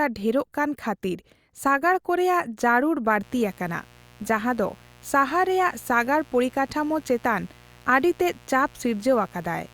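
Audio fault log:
3.23–9.73 s, mains buzz: a raspy buzz starts at 3.23 s and stays under the speech to the end, roughly 30 dB below it. Interference is getting in as sharp spikes twice per cycle of 60 Hz mains, so the spectrum is a dense comb of 60 Hz harmonics reaching into the kilohertz range. That gritty, edgy texture sets it apart from plain hum, which would be a smooth low tone at 60 Hz alone.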